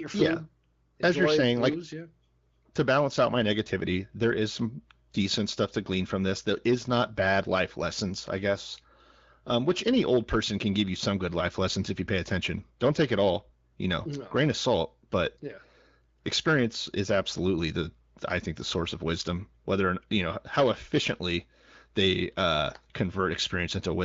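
Nothing stood out on listening to this speech, which is carried over an AMR wideband (HD Voice) codec at 15.85 kbit/s.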